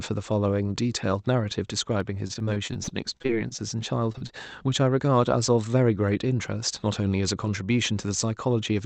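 At 2.00 s a single sharp click cuts through the speech. These are dropped samples, most likely. A fraction of a millisecond is missing, so the waveform jumps straight to a later value. Nothing audible is lost, only the tick. The same click recurs at 6.48 s.

From 2.27 to 3.60 s comes repeated packet loss, giving a robotic sound. Over a dozen holes open in this stretch, the longest 40 ms. Each is patched by stretching the last sound. About a fifth of the span is filled in. It sounds choppy, with pieces missing.

Next, three short concealed packet losses fall at 4.12, 4.18 and 4.27 s. Each is about 20 ms. The decoder extends the preceding sound to cover the gap, then blends back. Each is heard as a brief smear or wobble in the call audio.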